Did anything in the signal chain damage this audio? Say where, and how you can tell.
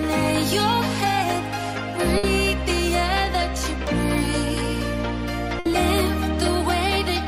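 Yes, at the network stage: a burst of packet loss at 2.17 to 2.26 s and 5.59 to 5.73 s. Each gap is bridged for about 60 ms by a fading extension of the previous sound, then audio jumps ahead. A plain dropout would fall silent instead.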